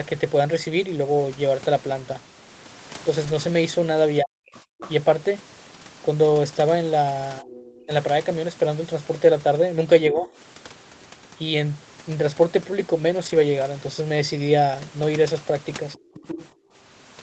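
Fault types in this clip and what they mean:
Lost packet rebuilt from error correction: at about 3.23 s and 13.25 s, 60 ms gets filled from a low-bitrate backup copy, so there's no gap, just a rougher, noisier patch.
Speech suppressed in double talk: the talker dips in pieces, as deep as about 40 dB, between 4.2 and 10.3 s and briefly near 15.9 s, likely the echo canceller choking on overlapping talk.
Other side's voice leaking through: a fainter second voice sits under the talker from about 4.6 to 10.3 s, then louder around 16.1 to 16.5 s, likely loudspeaker echo the canceller missed.
Background gated by the echo canceller: from 16.53 to 16.73 s the room sound drops about 21 dB as the canceller clamps the mic hard, then it comes straight back.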